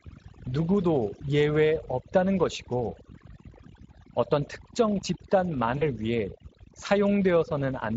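From the start, overdone noise removal is at work. A noise reducer was set far too strong. It pushes single frequency bands down or off whenever they sit near its noise estimate. Quiet parts of the speech vanish with them. The background drops and breaks up into twinkling specks.

The Speex codec damage also runs the whole length, and it is plainly audible. Speex is a CELP speech codec that models the voice with a filter and a coded excitation. Here the excitation gets too few bits to carry it cleanly. The speech sounds noisy and hoarse, with a rough, grainy edge. The degree of damage points to a data rate of around 16.8 kbps.

From 5.77 to 5.89 s comes VoIP packet loss concealed by the speech codec. About 40 ms of audio went missing, which fits two lost 20 ms frames. The decoder filled the gap by repeating its last pitch and filter while turning the gain down. That gap turns into a stretched sound that fades out. 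Each frame builds on the one before. So the speech stays weak or distorted for tens of milliseconds or more after 5.89 s, when the loss itself has ended.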